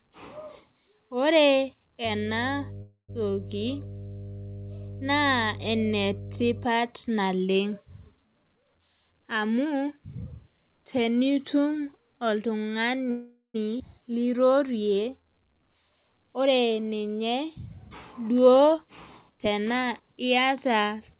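Speech heard over a call link, with everything above 4 kHz gone, as fits G.711 A-law telephone coding, carries several faults. From 2.05 to 6.65 s there is mains hum: a steady 50 Hz tone about 15 dB below the speech, with low harmonics. It shows on a spectrogram as a bright horizontal line at 50 Hz with fainter lines above it, starting and stopping abruptly. A call audio freeze occurs twice, from 2.82 to 3.10 s and from 13.11 to 13.56 s. In each, the last sound is stretched into a fading buzz and then about 110 ms and 130 ms of silence, before speech resumes with nothing lost. The likely cause is delayed packets draining the jitter buffer. A spectrogram shows a smeared, decaying band ending in a blank gap. Jitter buffer speed-up compresses the speech at unchanged pitch from 8.53 to 9.66 s (123% speed, roughly 300 ms removed), 15.67 to 16.78 s (113%, roughly 150 ms) and 19.29 to 20.82 s (118%, roughly 300 ms), as the receiver trims pitch periods to cut excess delay. 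On a waveform the syllables sit visibly closer together. At 13.78 to 13.82 s a skip ahead drops roughly 200 ms, as playback jumps forward and joins the two sides almost directly. It appears as an abrupt seam in the spectrogram. From 14.08 to 15.60 s jitter buffer slow-down runs the speech at 87% speed, adding 199 ms of repeated pitch periods. This draws sounds out, and in a spectrogram the harmonics look elongated.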